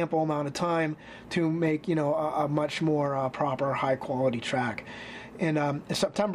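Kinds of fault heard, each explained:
No kinds of fault are heard in this audio.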